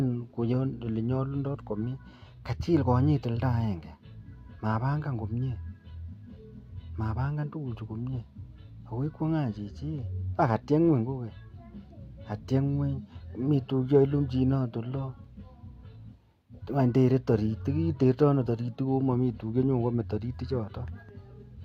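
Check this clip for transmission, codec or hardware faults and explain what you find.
Nothing in the recording stood out as a transmission, codec or hardware problem on listening.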